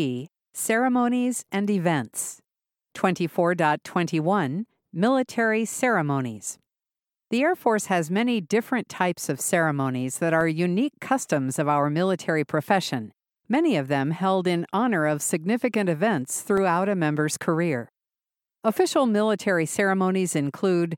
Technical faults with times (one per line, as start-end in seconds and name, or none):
10.41 block of digital silence
16.57 block of digital silence